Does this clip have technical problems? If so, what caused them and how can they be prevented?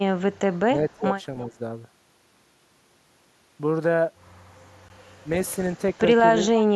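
Yes. Blocks of digital silence at 0.41 s (5 ms) and 4.89 s (15 ms): the output buffer was not filled in time and zeros went out instead, so the sound drops abruptly to nothing and back. Giving the audio thread more headroom or a larger buffer prevents this.

Speech suppressed in double talk from 0.64 to 1.2 s and 1.51 to 1.59 s: the talker's level dips by roughly 15 dB, then about 10 dB, likely because the echo canceller mistook overlapping speech for loudspeaker echo and turned both down. A canceller with better double-talk detection, or headsets, avoids it.

Echo leak from 1.4 to 1.45 s: a brief, faint delayed copy of the speech, arriving 339 ms late and roughly 35 dB below it, likely residual loudspeaker pickup the far side's echo canceller failed to remove. Headphones or stronger echo cancellation on that end prevent it.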